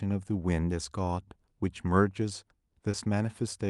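At 2.91 to 2.95 s the speech briefly smears into a short wobble where the real sound drops out. This is short concealed packet loss: about 20 ms of audio arrived too late, and the receiver bridged the gap by extending the preceding sound before blending back in. The call path's top end stops around 12 kHz, which fits an Opus call codec.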